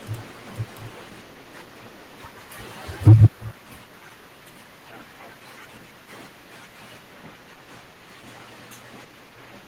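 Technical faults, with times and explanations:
3.07–3.26 s, microphone overload: peaks driven about 8 dB past full scale, with a large share of samples flattened, giving a harsh crackle, likely from excessive input gain.
3.08 s, microphone volume stepped down: level drops abruptly by 2 dB during the distorted stretch, likely the call software cutting input gain in one step.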